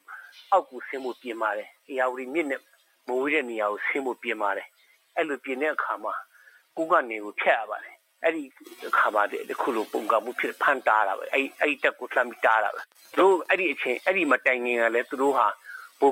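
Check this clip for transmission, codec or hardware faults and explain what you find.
Three faults are audible: a speech noise suppressor working on non-speech sound, repeated dips where it cuts the sound hard, and a burst of clicks near 13 s.

Noise suppressor applied to music or sounds: For the whole clip, a suppressor tuned for speech treats sustained tones, ambience and reverb tails as noise and pulls them down, with the loss swinging by roughly 10 dB as its estimate changes. Onsets get through while held portions sag, so the audio pumps and thins. Unlike ordinary compression, the gain follows how steady the sound is rather than how loud it is.

Sound cut by the noise suppressor: The suppressor bites much harder at 0.00–0.73 s, 1.64–1.89 s, 2.59–3.08 s, 4.68–5.16 s, 6.25–6.77 s, 7.94–8.77 s, 12.86–13.16 s and 15.56–16.01 s. Drops reach about 17–18 dB, and about 14 dB in the last one. 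Each covers a few hundred milliseconds of sustained or decaying material. Decays vanish early or the level caves in. A dropout would silence everything, but here transients still come through.

Train of clicks: From 12.66 to 13.73 s, about ten near-identical clicks arrive at a regular 7.5 per second, peaking roughly 10 dB above the surrounding sound. The likely cause is interference from nearby equipment or a faulty connection or power supply injecting a repeated pulse. The clicks are heard as steady ticking laid over the audio. Their even spacing and identical shape set them apart from random crackle or codec glitches, which vary in form and timing.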